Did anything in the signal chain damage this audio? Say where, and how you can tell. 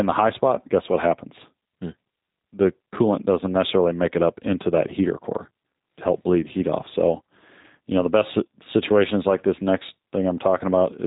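Yes, at the codec stage: the speech has passed through a G.729 codec across the whole clip. Nothing survives above about 3.8 kHz, so a spectrogram shows a hard ceiling with empty space above it from start to finish. The texture is plainly rough and synthetic, which fits an 8 kbit/s G.729A encoder that rebuilds each 10 ms frame from a vocal tract filter, a pitch predictor and a few sparse pulses rather than the original waveform.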